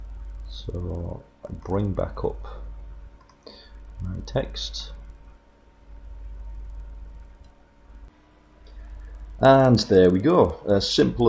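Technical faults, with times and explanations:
Throughout, resampler restarted on every block: the conversion, which fits 48 kHz down to 16 kHz, treats each 50 ms block separately. Each block's edges lack their real neighbouring samples, leaving a small error there. The result is a steady 20 Hz tick, heard only while sound plays.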